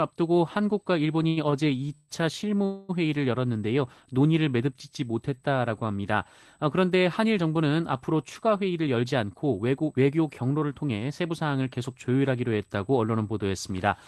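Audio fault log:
Throughout: USB whine, a steady high tone at 8 kHz with its strongest component an octave up at 16 kHz, sitting very roughly 35 dB below the sound. The pitch never drifts because it comes from the USB bus clock. Current drawn in 125-microsecond microframes pulses at 8 kHz and leaks into the audio through shared power or ground, so the whine sits at that rate and its multiples.
1.23 to 2.10 s: repeated stalls (stutter). Over this stretch the sound catches four times, with 241 ms of filled-in audio in total, the longest hold lasting 134 ms. About 28% of the span is concealment. Packets kept arriving late, so the jitter buffer ran dry again and again and the receiver stretched the last sound each time. Nothing is lost, but the delivery drags and stumbles.
2.65 to 2.91 s: call audio freeze. The sound stops moving for 236 ms and the gap is filled with a held continuation of the last sound, a buzz or hiss rather than silence. 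Then the audio resumes exactly where it left off, with nothing missing. This is likely a sudden 236 ms rise in network delay that emptied the jitter buffer, so the receiver had to improvise until packets caught up.
8.64 to 10.98 s: jitter buffer speed-up. For just over two seconds the sound runs at about 109% of normal speed while keeping its pitch, so it comes across as hurried. The buffer held more audio than it wanted. To trim the backlog the receiver cut out tiny pitch-period-length pieces many times in a row, removing roughly a fifth of a second in all.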